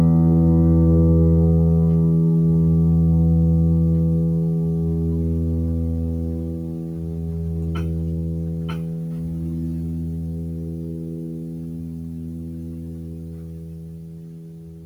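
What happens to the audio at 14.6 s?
Nothing goes wrong at 14.6 s: the music plays through that moment intact, with no dropout, click or distortion.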